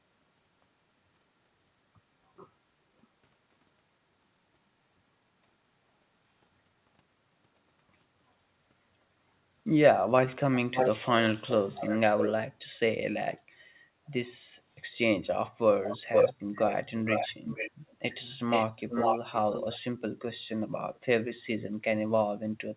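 Speech over a narrowband call path, with nothing above 4 kHz, which points to G.711 mu-law at 64 kbps, has an echo leak: a delayed copy of the talker returns at 10.54–10.89 s and 11.49–12.33 s, trailing by 583 ms, then at 15.84–16.74, 17.09–18.14, 18.51–19.8 and 20.95–20.99 s, trailing by 481 ms. The copy ranges from about 35 dB quieter to about 5 dB louder than the original, and the last scrap is barely there. The likely cause is a far-end loudspeaker feeding a microphone whose echo canceller let the signal back through.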